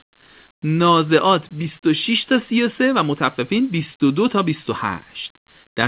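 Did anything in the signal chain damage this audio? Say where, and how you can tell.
No, nothing in the signal chain damaged this audio, and the lack of content above 4 kHz is simply how the call path normally sounds.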